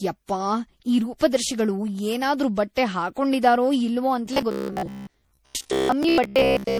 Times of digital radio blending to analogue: none

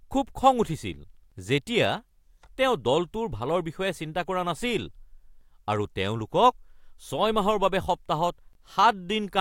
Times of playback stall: none

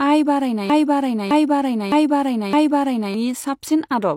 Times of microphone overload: none

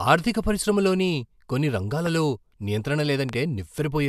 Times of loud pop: 2.06-2.08, 3.29-3.35

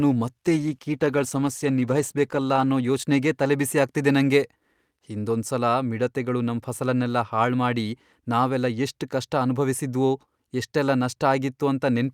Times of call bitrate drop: 0.47-4.25

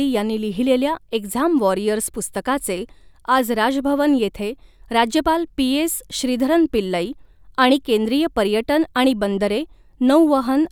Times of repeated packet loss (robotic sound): none

